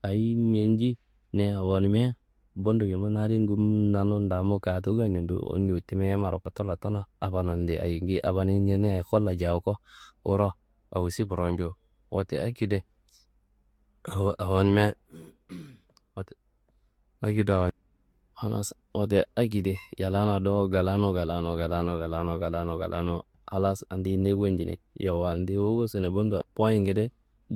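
Speech, with generation loss running through the whole clip. It sounds swirly and hollow, and consonant attacks are smeared. The damage is heavier than a single lossy encode at this quality would give. The likely cause is repeated Vorbis coding, about three passes, each around 70 kbit/s. Every pass quantised again on a shifted frame grid, so the noise and spectral holes stacked up. Nothing remains above 19.3 kHz.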